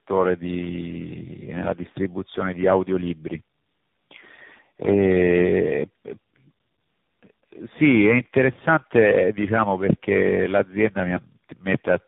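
Tandem speech coding runs through the whole clip. The speech sounds rough, muffled and warbly, with nothing above 3.8 kHz. That fits about four speech codecs in a row, ending in AMR-NB. Each one recoded the previous one's damage.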